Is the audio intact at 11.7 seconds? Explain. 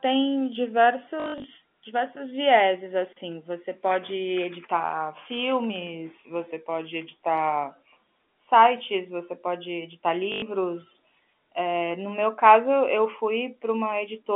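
Yes, the speech at 11.7 seconds is intact, carried cleanly through G.711 telephone coding with its usual narrow line band of roughly 200 Hz to 3.4 kHz.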